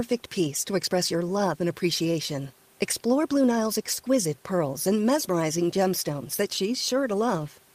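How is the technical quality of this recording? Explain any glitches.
No glitches or technical faults can be heard anywhere in the recording. There is some room noise from where the microphone sits, but it stays about 36 dB below the speech.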